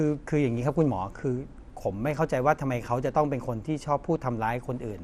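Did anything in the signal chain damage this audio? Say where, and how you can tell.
Yes, at the codec stage: the speech sounds dull and gurgly throughout, with nothing above 14.3 kHz, likely MP2 compression starving its upper sub-bands at something like 80 kbps.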